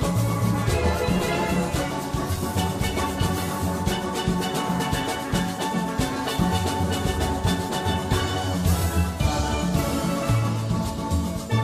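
No technical faults are audible.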